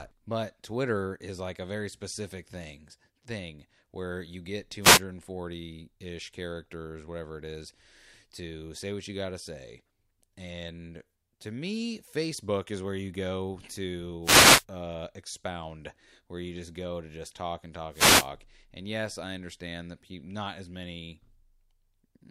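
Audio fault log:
4.81–5.01 s, 14.22–14.65 s, 17.91–18.29 s: wireless microphone noise hit after "thing where you get", before "uh expound where you", and after "to just talk and". Reflections cancel the FM radio signal, so receiver noise rises and is heard as brief static bursts.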